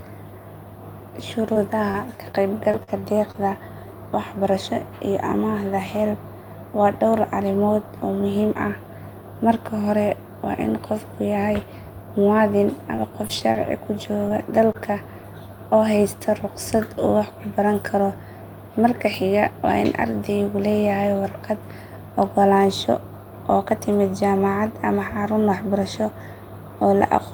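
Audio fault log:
1.53 s, 1.91 s and 2.32 s: short concealed packet loss. Each is a brief smear or wobble. About 20 ms of audio arrived too late or not at all, which fits a single lost 20 ms packet. The receiver stretched the preceding sound across the hole and blended back into the real signal.
2.71 to 3.39 s: repeated packet loss (robotic sound). The audio turns choppy, with pieces missing. Four gaps totalling about 100 ms, the longest 42 ms, were each patched by extending the last sound, so about 17% of the stretch is synthetic fill rather than real audio.
12.96 to 13.57 s: repeated packet loss (robotic sound). The sound briefly turns choppy. Four gaps totalling about 80 ms, none longer than 24 ms, were filled by continuing the prior sound, so about 12% of this stretch is concealment.
14.29 s and 14.72 s: short concealed packet loss. Each is a quick wobble or smear. Roughly 20 ms went missing each time, consistent with one dropped packet, and the decoder covered the gap by extrapolating the previous sound before crossfading back.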